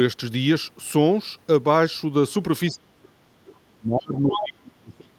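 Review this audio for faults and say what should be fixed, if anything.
The speech drops sharply, by about 35 dB at its deepest, from 2.69 to 3.19 s and again from 3.68 s to the end. This is likely speech suppressed in double talk: with both sides talking at once, the echo canceller mistook the near talker for loudspeaker echo and attenuated everything. To prevent it, tune the double-talk detector so that strong near-end energy holds the suppressor off rather than triggering it.

From 4.17 to 4.48 s a second voice comes through, about 10 dB below the talker. This is likely the other side's voice leaking through: the loudspeaker signal reached the microphone and the echo canceller left a residual, heard here as a short scrap. To prevent it, give the adaptive filter enough tail length and convergence time, and lower the loudspeaker level or improve acoustic isolation.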